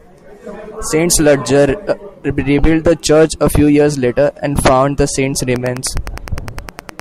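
Just after "and found the saint's", at 5.54 s, Wi-Fi interference kicks in: beacon ticks every 102.4 ms, rectified by the circuit, sitting well below the speech until the end.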